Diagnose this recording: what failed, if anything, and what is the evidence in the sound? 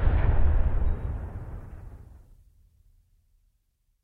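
Nothing failed; no faults heard.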